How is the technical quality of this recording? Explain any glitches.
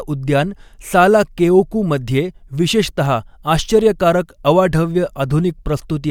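No technical glitches can be heard anywhere in this speech recording. Nothing in the audio calls for an explanation.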